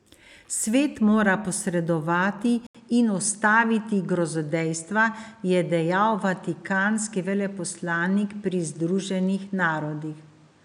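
At 2.67 s the speech drops out for about 80 ms, then resumes sounding duller and boxier through to the end, with faint new background noise roughly 35 dB beneath it and little change in loudness. This is most likely an input switched to a poorer device mid-recording. A spectrogram would show a brief blank gap, then energy cut off sharply above 10.5 kHz and a raised noise floor; the waveform shows the short flat gap.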